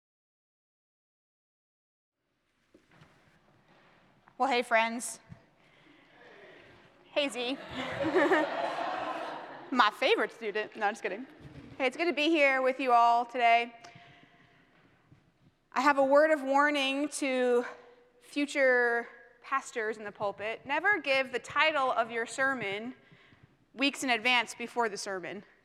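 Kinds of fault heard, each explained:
Block of digital silence: at 5.08 s the audio drops to silence for about 1.45 ms and snaps back with no fade, so you hear a single sharp tick rather than a gap. The tiny span fits a 64-sample buffer that wasn't filled in time.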